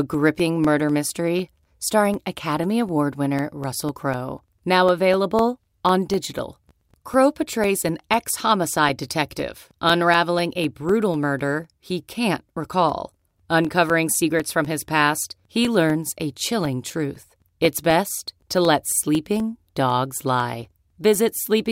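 From 0.14 to 21.65 s, periodic USB or driver dropouts recur every 0.25 s. Something blocks the audio path at a fixed interval. Each time, about two milliseconds of speech is replaced with silence. The result is a steady train of small ticks, heard only while sound is present.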